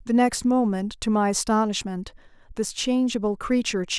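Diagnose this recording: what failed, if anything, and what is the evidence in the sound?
Nothing in the signal chain has failed: the speech arrives intact, with continuous level and no audible interruption, distortion or timing disturbance at any stage from capture to playback.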